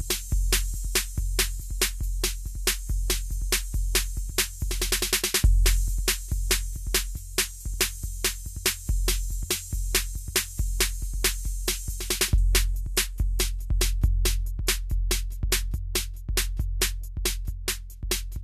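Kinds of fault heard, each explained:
No technical fault can be heard anywhere in this music clip. No dropout, glitch, distortion or other fault of any kind turns up at any point.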